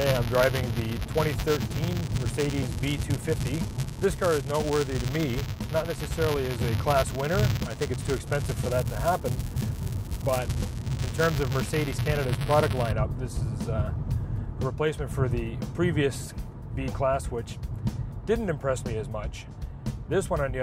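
From the start to 12.92 s a steady robotic buzz at 200 Hz rides on the sound, present only while there is signal. This is buffer tearing. The program filling the ring buffer and the hardware reading it have slipped out of step, so their positions cross inside every period. A small sliver of each period, a couple of percent, holds audio from one lap earlier, about 10 ms old, with hard joins on either side. That repeating splice, every 5 ms, produces the buzz.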